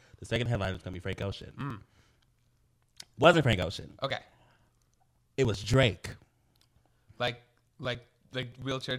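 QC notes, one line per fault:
0.07 to 8.91 s, periodic USB or driver dropouts: there's a steady tick running under the speech, one every 0.096 s, about a hundred across the clip. Each time, something is stalling the USB bus or audio driver and around 4 ms of audio just gets skipped, so the waveform jumps straight across the gap. That sudden jump is what clicks, and since the spacing never changes it comes across as a regular ticking wherever there's speech.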